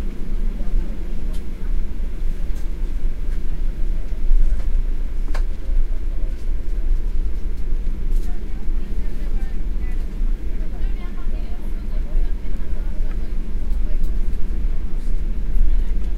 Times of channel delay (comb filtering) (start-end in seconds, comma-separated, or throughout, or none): none